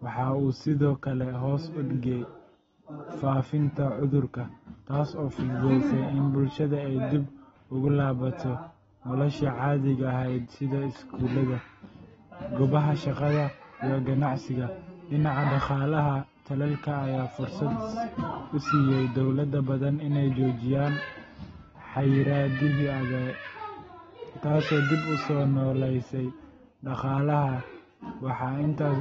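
From start to finish the speech is band-limited, with nothing above 7.6 kHz, and sounds dull and smeared, with a watery, warbling texture on sustained sounds and sibilants. This is likely AAC compression, AAC-LC at a low bitrate around 24 kbps.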